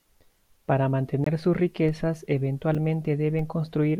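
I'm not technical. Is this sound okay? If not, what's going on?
No. Two kinds of fault are audible.

Block of digital silence at 1.24 to 1.26 s and again at 2.75 s. The audio abruptly drops to silence, for about 21 ms and then about 5 ms, likely because the program didn't supply sound in time. The first gap fits a missed 1024-sample buffer. The short second gap comes across as a tick or dip rather than a silence.

DC step at 1.89 s and 3.39 s. The waveform's resting level suddenly jumps off centre and then slowly settles back. Each jump is heard as a low thump, while the speech itself carries on unchanged.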